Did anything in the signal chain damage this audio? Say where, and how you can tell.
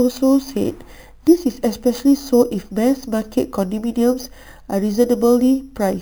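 Yes. The damage happened at a sample-rate conversion stage, where the audio was brought up to the output rate by holding each sample with no smoothing filter. The result is imaging from sample-and-hold upsampling. Mirror copies of the speech spectrum sit about 23 dB below the signal. The first copy spans roughly 5.5 kHz to 11 kHz, which points to an original rate near 11 kHz raised to 44.1 kHz. A bright metallic fizz rides on the speech for the whole clip, rising and falling with it.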